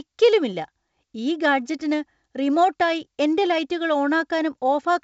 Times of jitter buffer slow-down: none

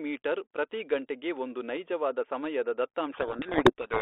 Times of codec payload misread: 3.12-4.02

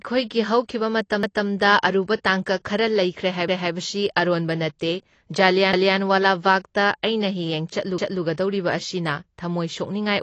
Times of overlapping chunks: 1.23-1.48, 3.48-3.73, 5.73-5.98, 7.98-8.23

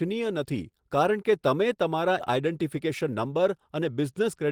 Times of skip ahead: 2.19-2.21

